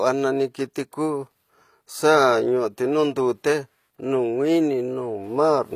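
Throughout, the speech was likely squeezed by HE-AAC compression at a low bitrate near 24 kbps, so the treble is rebuilt rather than kept: s sounds turn gritty and metallic, and nothing reaches past 14.9 kHz.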